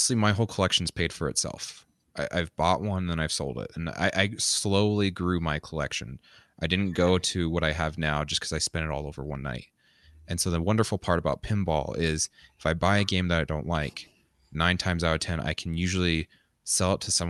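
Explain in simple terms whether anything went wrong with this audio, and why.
Nothing went wrong here: the speech came through an ordinary internet call connection, which trims off only the very highest frequencies, and nothing in it stands out as a problem.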